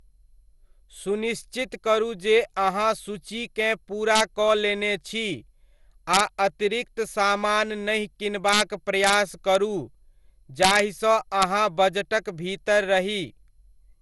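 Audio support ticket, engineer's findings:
Swirly, smeared, hollow speech throughout; attacks blurred; nothing above 11.8 kHz. Likely generation loss, around seven MP2 re-encodes at something like 96 kbit/s. Too degraded for one encode at that rate.

Integer overflow: violent full-range cracks at 4.15–4.21 s after "करू जे अहाँ सूचीकेँ", 6.14–6.20 s, 8.49–8.61 s after "समान नहि", 9.04–9.14 s, 9.55 s, 10.63–10.79 s, and 11.42 s. Peaks overdriven by about 0–3 dB wrap to the opposite sign, so they crack far harsher than clipping.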